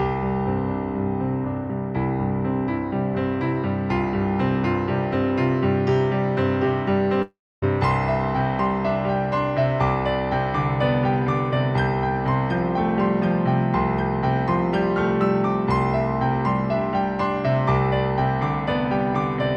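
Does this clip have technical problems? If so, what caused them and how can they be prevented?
Yes. From 7.22 to 7.64 s there is a long network dropout, likely lost packets. The last sound stretches into a fading buzz and then 0.27 s of silence, and 0.4 s of audio is lost for good. A spectrogram shows a smeared tail fading into a blank gap. A larger jitter buffer with forward error correction, on a steadier connection, would help prevent it.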